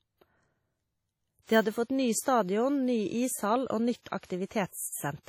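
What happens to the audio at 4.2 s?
Two bursts of pre-echo land here. The first runs from 4.19 to 4.23 s, about 39 ms of spread. The second runs from 4.25 to 4.30 s, about 49 ms. In each, a short hiss rises just before a sharp onset in the speech. The attack itself sounds soft and smeared. This happens because the codec shares its quantisation noise across a whole transform block. A sudden loud moment late in the block sets a high noise level. That noise then also fills the quiet stretch ahead of it.

Both bursts sit inside heavy codec damage that runs through the clip. It is likely WMA compression at a low bitrate, consistent with roughly 32 kbps. Long transform blocks smear the noise over tens of milliseconds. Weak spectral detail is thrown away. The result sounds washy and ringing, with hiss that swells and fades with the speech. Nothing is present above 16.9 kHz.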